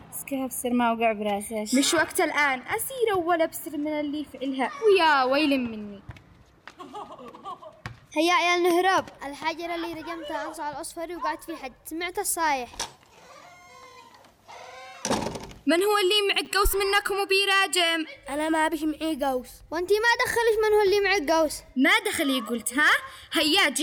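At 16.45 to 16.47 s there is a case of chunks out of order. One 10 ms chunk of audio was delivered late and plays one chunk after its proper place, so two adjacent slices are swapped. Nothing is lost, but three hard joins produce a brief jumbled flicker.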